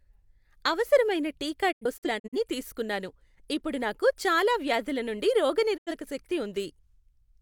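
Digital broadcast dropout: the receiver lost frames and muted until clean ones returned. From 1.71 to 2.37 s the speech breaks into several short holes, totalling about 213 ms, the longest 85 ms, each with a 20 ms fade. At 5.76 to 5.92 s about 85 ms of audio drops out.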